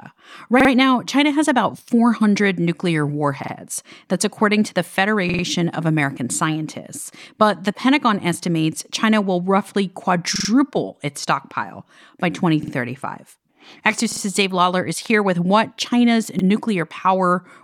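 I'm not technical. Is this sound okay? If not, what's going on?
No. There are repeated buffer stutters at 0.60, 3.44, 5.29, 10.36, 12.63, 14.12 and 16.39 s. New audio arrived late, so the device replayed its last 46 ms slice of speech, which fits a 2048-sample buffer. You hear it two to four times with abrupt joins.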